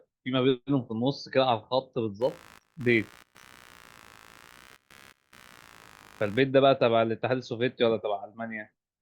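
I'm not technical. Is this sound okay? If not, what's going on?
No. From about 2.21 to 6.40 seconds there is computer activity noise. It sounds like a low, rough buzz under the speech, pulsing about seventy times a second. It is quiet, well below the voice. The buzz follows what the computer is doing, not what is being said. When the processor or graphics card works harder, it disturbs the electrical ground that the audio circuit shares. That disturbance leaks into the recording.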